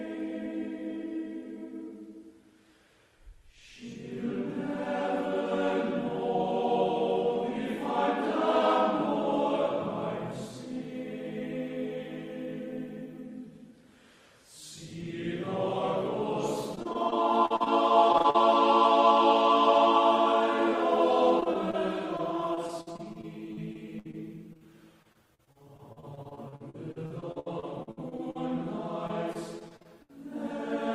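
Repeated packet loss (robotic sound) affects the second half of the audio in six stretches: 16.75–17.68 s, 18.12–18.36 s, 21.40–21.75 s, 22.17–24.15 s, 25.03–28.37 s and 29.07–30.11 s. In each, packets keep failing to arrive in time. The receiver papers over every hole by extending the last sound it had, and the next dropout comes soon after. Gaps run up to about 60 ms, and roughly a fifth of each stretch is synthetic fill, reaching about 40% at 18.1 s. The result is choppy, patched-together audio with pieces missing. Short concealed packet loss also occurs as two back-to-back dropouts between these stretches, a brief one at 24.53 s and a roughly 40 ms one at 24.57–24.63 s. Here a few hundredths of a second never reached the decoder. The receiver continued the preceding sound to fill the hole and then blended back into the real signal, so each dropout is heard as a momentary smear or wobble.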